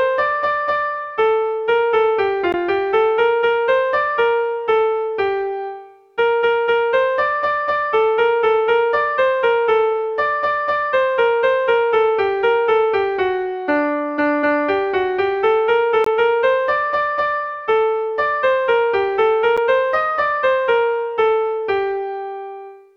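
Blocks of digital silence occur at 2.52 s, 16.04 s and 19.57 s, lasting about 15 ms, 20 ms and 9 ms. In each, a short run of samples was replaced by zeros, so the sound drops straight to nothing and returns with no fade. The two shorter gaps, under 15 ms, come across as a tick or dip, and the 20 ms one as a short hole.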